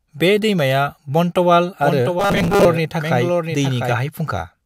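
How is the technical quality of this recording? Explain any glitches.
The recording has two glitches, both in the middle of the speech.

From 1.84 to 3.92 s, a doubled audio track appears. A second, full-band copy of the speech trails about 0.7 s behind, at roughly 5 dB quieter, with no room colour, and starts and stops abruptly. It is likely captured twice by a slower path or by misaligned edit copies.

From 2.20 to 2.65 s, robotic sound from repeated short buffers turns the speech into a rigid, metallic buzz at 200 Hz that only loosely tracks it. The likely cause is late-arriving audio, with the last 5 ms looped to fill most of that stretch while real audio is skipped.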